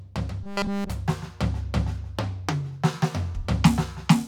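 Robotic sound from repeated short buffers, 0.43 to 0.90 s: the music collapses into a rigid 200 Hz metallic buzz, likely from one 5 ms chunk being looped throughout.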